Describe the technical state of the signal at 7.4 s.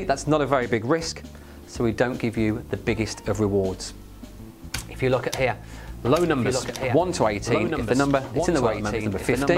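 At 7.4 s the signal carries a doubled audio track, present from 5.92 s to the end. A full-band copy of the sound runs about one and a half seconds behind, roughly 5 dB quieter, with no decay or room colouring, likely from a second, slower capture path mixed back in. On a spectrogram the same patterns repeat at a fixed offset. The waveform shows overlapping envelopes, and the copy's entry at 5.92 s is abrupt rather than fading in.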